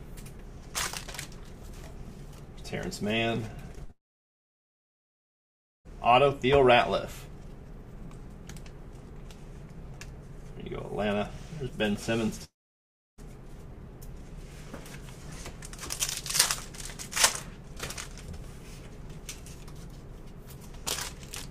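You'll hear short concealed packet loss at 3.75 s and again at 3.85 to 3.91 s: a couple of brief smears where a few hundredths of a second went missing and the decoder patched the gap by stretching the last bit of sound, then blended back in. Right after that, from 3.91 to 5.91 s, there's a long network dropout: the patched sound fades out and about 1.9 s of silence follows. Another dropout runs from 12.44 to 13.20 s, with roughly 0.7 s of silence. Both gaps are likely caused by packets simply not arriving, so that stretch of audio is lost rather than delayed.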